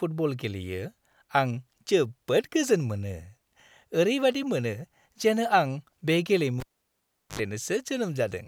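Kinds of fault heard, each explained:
Cable pulled and plugged in: a live lead is yanked out and reinserted around 6.6 s, giving a pop, roughly 743 ms of near silence, then about 69 ms of 50 Hz mains buzz before a second pop at 7.39 s; the waveform flatlines between two spikes, and the spectrogram shows a short 50 Hz harmonic stack.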